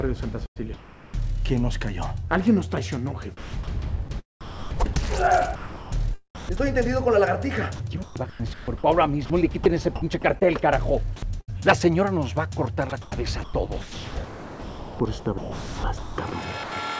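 The sound gets chopped at 0.46–1.14 s, 3.37–4.96, 5.56–6.90, 7.76–10.47, 11.16–11.50 and 12.90–16.72 s. Quiet stretches drop to a synthetic hiss, about half a second in most of them, only 0.13 s at 11.16–11.50 s, and more than 2 s in the last one. The likely cause is the voice detector gating in comfort noise.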